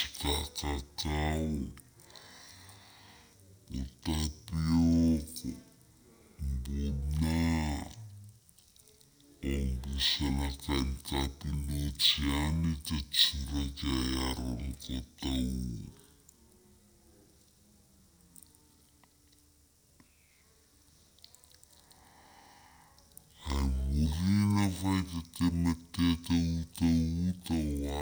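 From start to finish, a stereo read as mono fault: interleaved left and right samples were taken one after another as a single channel. The speech therefore plays at half speed, 0.5 times normal, and pitched a full octave low, down 12 semitones, sounding slow and deep throughout.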